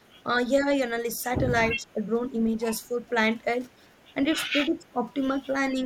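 From 1.77 to 2.02 s the speech level drops by around 10 dB, and from 4.6 to 5.02 s it drops further, by roughly 15 dB, with the dip spanning most of that stretch. This is speech suppressed in double talk. The likely cause is both ends talking at once, so the echo canceller mistook the near talker for loudspeaker echo and attenuated everything. The voice sinks, then recovers once the overlap ends.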